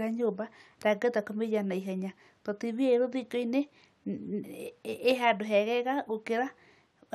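No technical faults can be heard anywhere in the recording. There is nothing in the speech to place on the timeline.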